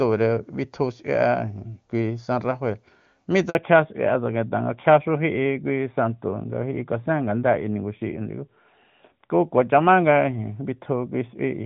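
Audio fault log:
3.49 to 3.55 s, handover gap: the sound cuts out for 60 ms as the call switches networks. No speech frames reach the decoder during the switch, so the audio fades within milliseconds, stays silent until the new link starts, and that stretch is lost.
3.55 s to the end, fallback to narrowband: after the gap the call drops from the wideband HD Voice codec to a narrowband one. Nothing above 4 kHz survives, so airy detail vanishes and the speech turns duller and rougher, which fits AMR-NB at 12.2 kbit/s.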